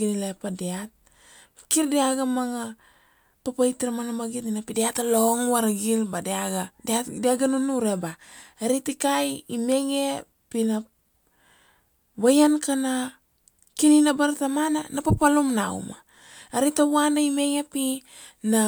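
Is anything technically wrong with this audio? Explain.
No, nothing technically wrong turns up anywhere in this speech recording.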